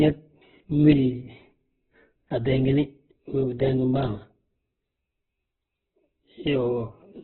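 Speech with heavy Opus compression throughout. Nothing sounds above 4.1 kHz. It is rough and grainy, likely from a very low bitrate near 8 kbps.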